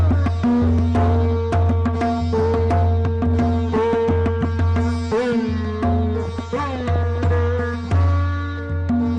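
The audio shows DAB burbling from 6.25 to 7.18 s. Weak reception let bit errors through the error correction into the MP2 data, at around half a percent, so corrupted data puts short blips of noise into individual sub-bands. The result is burbling over the programme across what sounds like several dozen frames.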